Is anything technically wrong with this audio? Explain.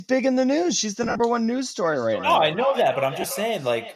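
Yes, there are two kinds of fault in this speech.

Lost LE Audio frames occur from 1.03 to 1.20 s and again at 3.21 to 3.24 s. The first is about 90 ms of gaps scattered over 165 ms, the longest run around 50 ms; the second is about 22.5 ms, which fits 7.5 ms frames. The decoder repeats the last spectrum with random signs, so the sound smears noisily. A spectrogram shows blurred, flattened patches.

Feedback echo between two devices runs from 1.85 s to the end. A second device in the room replays this audio, and the original microphone picks it up and sends it back uncancelled, so each sound returns about every 0.3 s, thinner and ringing, peaking about 11 dB below the speech. On a waveform, ghost copies trail each burst. Any slight graininess likely comes from the LC3 codec.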